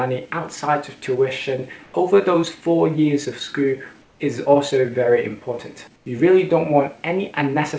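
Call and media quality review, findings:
Comfort noise in place of the background, 1.84–1.94 s, 4.02–4.20 s, 5.96–6.06 s (100, 180, 100 ms). Quiet background, about 36–39 dB below loud passages, swapped for steady featureless noise; level about 1 dB up at first gap, about 4 dB down at others. Likely DTX on sender: VAD idles stream, receiver synthesises shaped noise. Band-limited above 8 kHz, fitting wideband G.722 call path.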